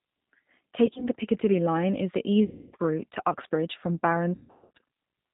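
Speech runs through the G.729 codec, almost certainly the 8 kbit/s G.729A variant, and the damage is plainly audible: nothing above 4 kHz survives, and the pulse-based excitation gives the voice a rough, slightly synthetic edge. VoIP packet loss concealed by the speech codec breaks in three times. From 0.86 to 1.08 s, short gaps scattered over about 160 ms leave a flickering, buzzy roughness. From 2.45 to 2.76 s, between "is the" and "route to", a continuous dropout is stretched into a fading tone. From 4.35 to 4.78 s, gaps of up to 140 ms decay into coloured noise, and the voice stays weak afterwards while the decoder recovers.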